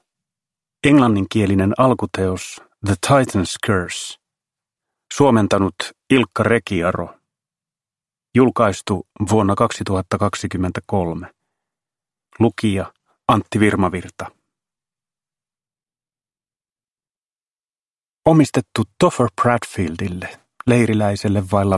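No technical faults are audible.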